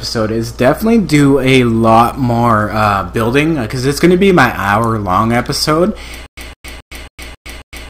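Hard clipping runs through the whole clip. The signal is driven about 8 dB beyond what a stage could pass, so peaks are sliced flat on well under one percent of samples. It sounds like brittle crackle only on the loudest moments, not the smooth, continuous thickening of soft saturation.

From 6.26 s to the end, there is a stutter with silent gaps. A 0.16 s fragment plays, then about 0.11 s of dead digital silence, repeating every 0.27 s, six times. The even, identical repeats separate it from random dropouts. This likely comes from a stalled stream replaying its last buffer.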